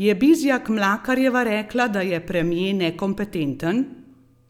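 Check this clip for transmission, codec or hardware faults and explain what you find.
No faults turn up when this clip is checked.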